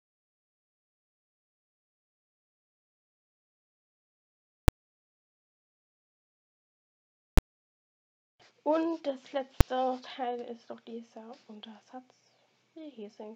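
Invalid numbers at full scale occur at 4.68 s, 7.38 s and 9.61 s. A calculation produced infinite or invalid values, which were forced to the maximum output level for 5, 10 and 5 ms. Each block is so brief that it is heard as a single sharp bang.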